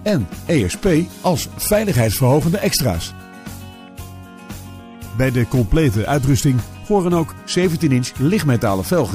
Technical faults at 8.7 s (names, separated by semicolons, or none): sample clock jitter